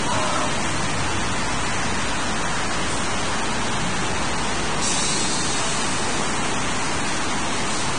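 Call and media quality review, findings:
Low bit depth without dither, throughout: gritty, grainy distortion tracking the signal, error nearly as loud as the sound itself. Probable component: a truncating requantiser, likely a 3-bit stage. Waveform shows coarse staircase steps; spectrogram shows broadband grain following every onset.

Vorbis compression, throughout: hissy, grainy texture, roughened tones, smeared attacks; heavy damage. Sound points to a low-bitrate Vorbis encode near 25 kbps. Spectrogram: hard ceiling at 9.7 kHz, treble above mid-band broken into noisy blotches.

Loose connector crackle, 1.90–1.97 s and 4.77–4.83 s: two short irregular bursts of crackle. Probable component: a worn or dirty contact making and breaking under movement, chopping the signal. Spectrogram: vertical broadband streaks at both times. Waveform: jagged spikes and dropouts confined to each burst.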